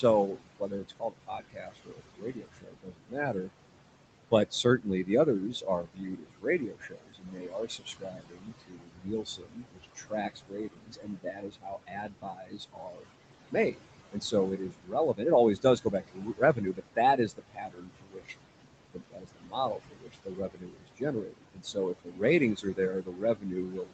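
Noise suppressor artifacts run through the whole recording. The suppressor pulls down the room noise, which sits only about 10 dB below the speech, by about 21 dB wherever it classes a band as steady noise, frame by frame. The background therefore drops away in pauses and swells back under speech. The voice sits in a band that stops near 8 kHz.

Speech cut by the noise suppressor recurs in seven spans: 0.01–3.5 s, 4.31–5.09 s, 5.52–13.09 s, 13.51–15.22 s, 15.56–18.35 s, 18.91–22.23 s, and 22.55 s to the end. Here the suppressor mistakes quiet speech for noise and attenuates it along with the background, by up to about 22 dB (about 15 dB in the 4.31 s span). Soft consonants and word tails sound swallowed or faded. The longest span loses around five seconds of such material in total, the 4.31 s span only a fraction of a second.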